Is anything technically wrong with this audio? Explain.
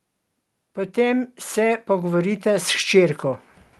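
Yes. From 0.94 to 3.25 s, automatic gain rising: the gain control, hearing a quiet input, steadily lifts level by about 8 dB, so speech and background swell together, visible as a widening waveform envelope. The call path's Opus coding shows as a spectrogram ceiling near 12 kHz.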